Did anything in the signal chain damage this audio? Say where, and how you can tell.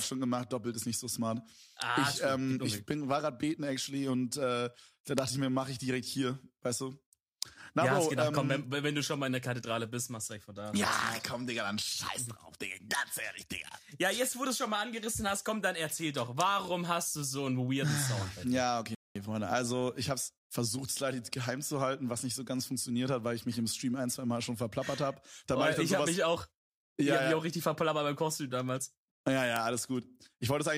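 Yes. Bit error spikes at 5.18 s, 15.67 s, 28.69 s and 29.56 s point to a flipped bit in storage or on a digital link. Each is a single hard tick across the whole spectrum, unrelated to the surrounding sound. The one at 5.18 s spans three samples, the others one. Unlike an analogue crackle or a converter glitch, each spike jumps and returns instantly, with no ringing.

A playback stall at 18.95 s cuts the sound off mid-flow for about 207 ms, until 19.16 s, after which it carries on. That length of clean silence, with no smeared or repeated fragments around it, distinguishes it from codec packet-loss concealment. The likely cause is the player's buffer running dry or its thread being blocked.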